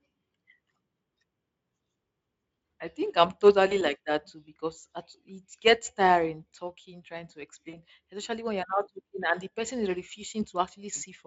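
VoIP packet loss concealed by the speech codec strikes twice. The decoder fills the gaps from its last pitch and filter, fading the gain: at 3.69 to 3.78 s one 20 ms frame seems lost, at 7.69 to 7.78 s about 40 ms, each smeared into a buzzy tone or coloured noise that fades.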